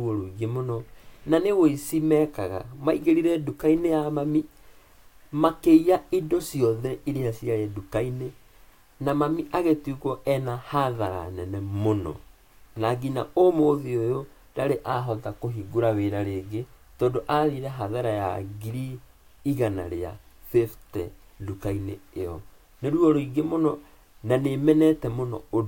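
From 0.65 to 25.58 s, faint ticks recur roughly every 0.7 s: clock slip clicks, likely from unsynchronised clocks around 30 ppm apart, showing as thin vertical spectrogram lines.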